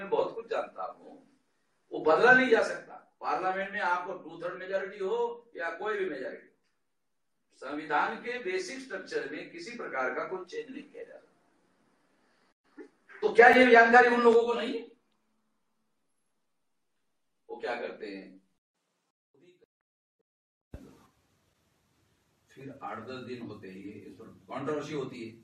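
No technical faults can be heard anywhere in the recording. The audio runs without dropouts, clicks, glitches or other interruptions.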